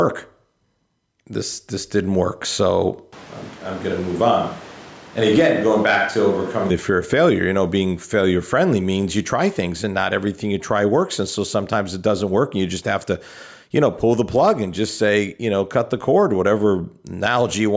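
Gain pumping runs through the whole clip. The gain is pulled down under every loud syllable, with a swing of roughly 10 dB. The likely cause is gain set far too high, with a fast limiter clamping down on each peak. The speech sounds squashed and flat.

From 3.13 to 6.7 s, just before "the fear of failure", there is a switch to a distant microphone. The sound suddenly turns hollow and roomy, with thinner bass. Level falls by roughly 5 dB. Room noise rises to about 25 dB below the speech. The close microphone's signal likely dropped out, leaving a farther pickup. The change back is just as abrupt. Throughout, the call microphone processing caps the sound at 8 kHz.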